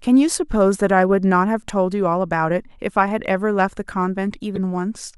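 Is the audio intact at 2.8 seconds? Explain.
Yes, at 2.8 seconds the speech runs on intact, with no dropout, click or other fault to be heard there.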